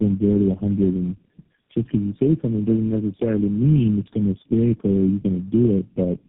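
Throughout, tandem speech coding: the sound fits four low-rate codecs in series, each re-encoding the last one's errors, so roughness and warble compound beyond any single codec, with nothing above 3.3 kHz.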